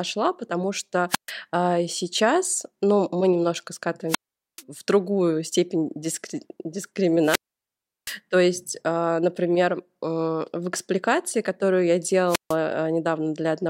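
Wireless microphone squelch dropouts occur at 1.09–1.32 s (after "потому что"), 4.08–4.63 s (after "сейчас ну мы немножко"), 7.21–8.18 s and 12.27–12.56 s (after "в экспликации которую я"). Each time the radio signal fades and hiss rises. The receiver's squelch then mutes the speech into near silence for 134, 435, 720 and 150 ms respectively before it returns.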